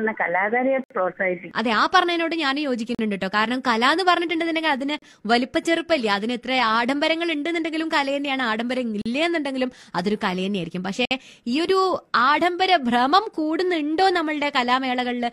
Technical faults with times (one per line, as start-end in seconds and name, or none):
0.84-0.91 gap between stream segments
2.95-2.99 gap between stream segments
4.99-5.02 gap between stream segments
9.02-9.06 gap between stream segments
11.05-11.11 gap between stream segments